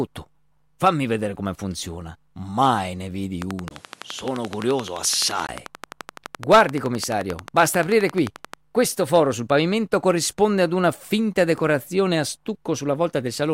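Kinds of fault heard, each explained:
Train of clicks: a steady ticking of about 11.5 clicks per second, some 70 in all, from just after "ne vedi" at 3.42 s to 8.55 s, likely outside interference or a faulty connection or power supply.
Input switched to a poorer device: after "ne vedi", a 20 ms gap, then duller, roughly 5 dB quieter sound with nothing above 12.9 kHz until 5.49 s, likely a switch to another microphone or headset.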